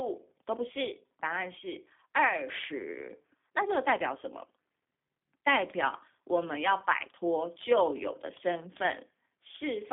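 Throughout, the speech carries G.729 codec damage: a sound that fits an 8 kbit/s G.729A link, rebuilt from a vocal tract model and sparse pulses, so it is rough and faintly synthetic. On a spectrogram, energy sits between 200 Hz and 3.6 kHz, with nothing above 3.7 kHz.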